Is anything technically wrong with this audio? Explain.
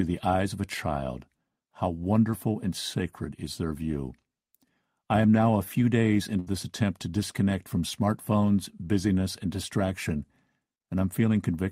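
Yes. From 6.39 to 6.49 s there is a burst of packet loss. Several packets arrived too late or not at all, so the receiver held the last sound and faded it for 71 ms. The audio then picks up with 80 ms skipped.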